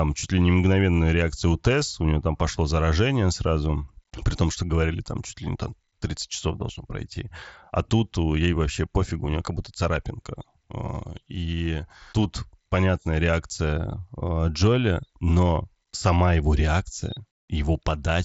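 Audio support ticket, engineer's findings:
No faults found in the speech. Bandwidth stops around 8 kHz with faint graininess on louder passages, consistent with a working Bluetooth mSBC headset codec link.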